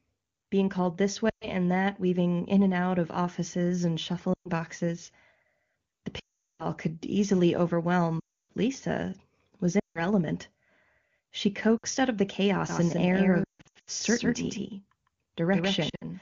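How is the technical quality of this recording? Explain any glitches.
The recording has repeated dropouts and, near the end, a doubled signal. The wideband coding itself sounds clean, which fits a high AMR-WB rate.

Lost AMR speech frames occur at 1.29, 4.33, 6.19, 8.19, 9.80, 11.77, 13.44 and 15.89 s, lasting 60 to 400 ms. Corrupted frames were replaced by decoder concealment, so speech smears and fades toward silence. The worst are the 400 ms run at 6.19 s and the 300 ms run at 8.19 s. The ones at 13.44 and 15.89 s are scattered, giving a choppy warble.

A doubled audio track runs from 12.69 s to the end. A second copy arrives roughly 150 ms late and about 5 dB quieter, likely from a slower duplicate capture path, producing a dry, echo-like repeat.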